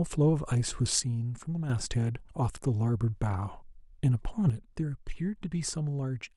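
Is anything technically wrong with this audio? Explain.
Yes. The speech drops abruptly by about 6 dB from 1.00 to 1.70 s, then again from 4.50 s to the end. Both are consistent with one channel drops out: with one stereo channel likely lost, the mono sum keeps only half of the material common to both sides, so the level falls by about 6 dB, and anything carried only in the missing channel vanishes. The result is a sudden quieter stretch with hard edges.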